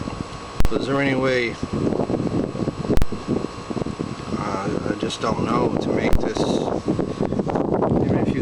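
At 0.60, 2.97 and 6.13 s, invalid numbers at full scale pin the output to one extreme value for about 46, 46 and 23 ms, fitting 2048- and 1024-sample blocks. Each sounds like a hard bang, showing as a flat slab held at one extreme and a full-height vertical band.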